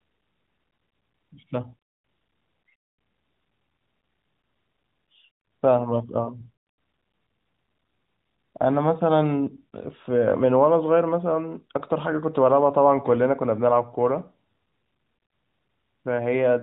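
Nothing's actually wrong with this speech recording; it has simply come through an AMR narrowband mobile codec link at 12.2 kbps that's doing its job as expected.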